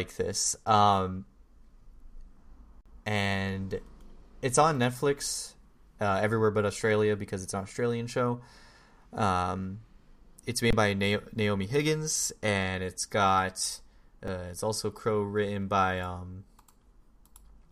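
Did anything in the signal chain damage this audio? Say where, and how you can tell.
Yes, at the driver or buffer stage. Underruns with held sample occur at 0.65 s, 2.81–2.86 s, 10.70–10.73 s, and 14.28 s between "and it's got" and "it's also crow written". The output held its last value. Each flat stretch ends where audio was skipped.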